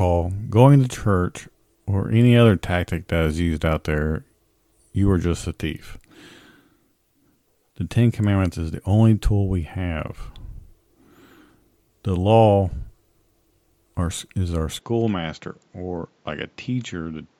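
Speech, with an input switched to a poorer device at 14.79 s: from there to the end, nothing above 7.6 kHz, the level drops by about 5 dB and a new background noise sits roughly 40 dB down, with no gap at the switch. That fresh noise floor marks a likely device change rather than mere filtering.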